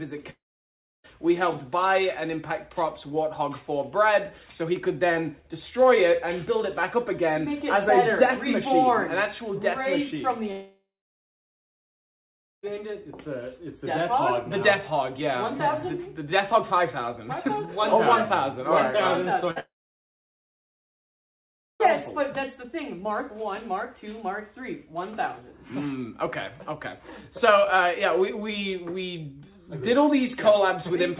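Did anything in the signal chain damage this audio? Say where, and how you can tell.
Yes, the network stage. There are long network dropouts at 0.3–1.06 s, 10.52–12.65 s and 19.60–21.82 s. Each has a short fading fill, then silence, and the audio comes back with a chunk gone, likely from packets never arriving.

Just before the last one there's a burst of packet loss at 19.51–19.58 s: about 51 ms concealed as a held, decaying tail before the audio picks up further on.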